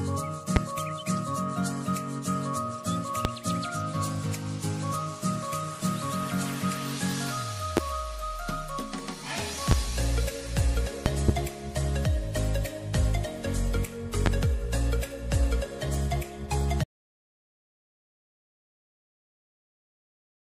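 A loud pop lands at 0.56, 3.25, 7.77, 9.71 and 14.26 s, each a sharp click of about 30 ms. At 11.06 s two pops arrive in quick succession, the second ending near 11.31 s. Each jumps to around 20 dB above the surrounding sound, which carries on beneath it. The likely cause is a sudden voltage spike, from static, a switch or a driver glitch, entering the signal path.

At 16.84 s an audio dropout to silence begins and lasts to the end. The sound stops abruptly, leaving silence with no room tone at all. This likely happened because the input was lost, through a disconnected device or failed link, while the recorder kept writing silence. Whatever occurred after that point is missing.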